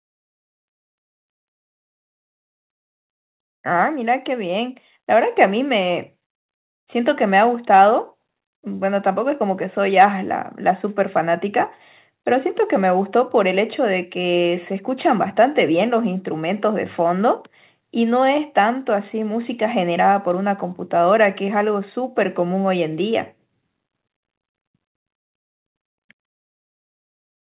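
No faults found in this speech recording; nothing sounds above about 4 kHz, which points to a narrowband call path such as G.711 mu-law at 64 kbps.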